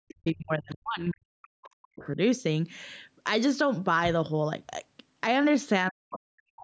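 From 0 to 2.18 s the speech is suppressed in double talk. The level sinks by around 40 dB at its deepest, over roughly two seconds. The voice dips while the far side plays. The likely cause is an echo canceller pulling down the talker along with loudspeaker echo.

Inside that stretch, the other side's voice leaks through in brief scraps at 0.27 s and 0.71 s, each about 40 ms. They are very faint, far below the speech. A longer fragment follows from 2.00 to 2.08 s, somewhat louder. Residue like this points to echo not fully removed.

From 5.89 s to the end, speech is suppressed in double talk again. This covers about half a second, with a similarly deep drop.

At 6.11 to 6.19 s the other side's voice leaks through once more. This is the loudest leak, only moderately below the speech. It comes through as a second voice.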